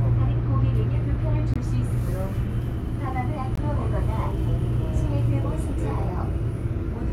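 Gaps between stream segments fall at 1.54 to 1.56 s, 3.55 to 3.58 s and 5.57 s, spaced roughly every 2 s. The segment time stamps leave holes of about 21 ms, then 3.4 ms, which play as hard-edged silent dropouts. No sound is lost.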